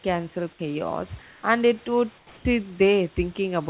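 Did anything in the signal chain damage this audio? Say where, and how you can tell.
Yes. In the speech pauses from 1.22 to 1.43 s and from 2.18 to 2.45 s, the room background, about 30 dB below the loud parts, turns into a steady, featureless hiss, about 1 dB and then about 4 dB quieter. That is comfort noise in place of the background, likely from discontinuous transmission in the call processing, with the receiver synthesising noise. A dropout would leave silence, but here the gap is filled, and the filler lacks the room's texture. The narrowband call path, with nothing above 4 kHz, fits G.711.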